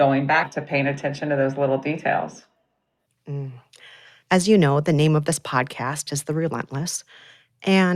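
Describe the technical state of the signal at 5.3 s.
At 5.3 s the speech signal is intact, with no audible fault at that moment.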